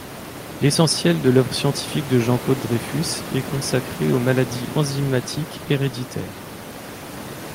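No faults are audible in this speech; the only thing beneath it is the room noise captured by the microphone, sitting about 15 dB under the voice level.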